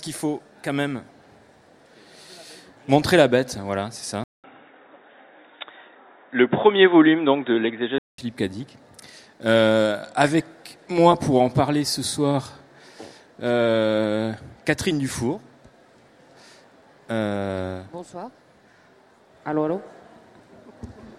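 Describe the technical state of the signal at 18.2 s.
At 18.2 s the signal is intact, with no technical fault audible at that moment.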